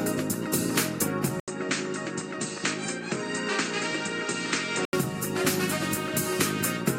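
From 1.40 to 4.93 s the audio goes duller and a few dB quieter, topping out near 8.6 kHz with an 80 ms gap and faint new background noise, likely an input switched to a poorer device.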